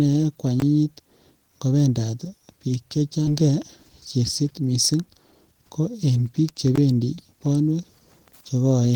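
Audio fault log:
0.60–0.62 s and 6.76–6.78 s, block of digital silence: twice the speech drops to silence for 20 ms and then returns. There is no fade in or out, so each hole is bounded by a hard discontinuity. At this length the result is a short, sharp dropout rather than an audible pause. The cause is most plausibly output buffers that were not filled in time.
3.27–3.29 s, skip ahead: directly after "ngo bendat biik" the playback jumps forward. About one and a half seconds of speech is missing, and nothing is inserted to cover the join, so the material before and after the cut is spliced almost directly together. This indicates audio that was discarded while later packets were already queued, with the effective playout delay reduced by roughly the same amount.
4.17–5.80 s, jitter buffer speed-up: for about 1.6 s the speech runs at roughly 117% of normal rate while the pitch stays unchanged, so it sounds hurried rather than higher. 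The receiver is trimming short pitch-period-sized segments in quick succession to drain excess buffered audio, removing about 300 ms in total. This is consistent with a backlog of delayed packets arriving together and then being compressed out of the buffer.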